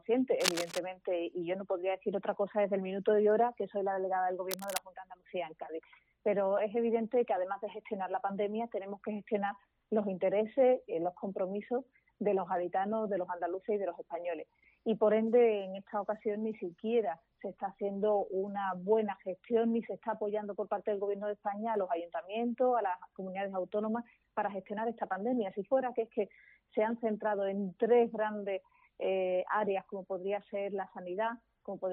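From 0.40 to 0.79 s, a burst of cable scratch noise rasps over the sound, only slightly quieter than the sound itself. At 4.51 to 4.78 s, a shorter, softer burst sits about 10 dB below. Both are dense, uneven rustling, likely from a worn connector or lead being moved so its contact resistance jumps about. Unlike isolated clicks or crackle, each is a continuous scratchy smear lasting a fraction of a second.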